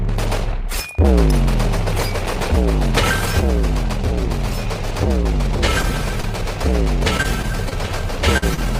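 Short concealed packet loss at 5.81–5.85 s and 6.21–6.25 s: about 20 ms of audio never arrived in time, so the receiver extended the preceding sound, leaving a brief smear or wobble. Repeated packet loss (robotic sound) at 7.17–7.73 s and 8.15–8.63 s: audio kept dropping out, with gaps up to 45 ms patched by continuing the last sound. The result is choppy sound with pieces missing.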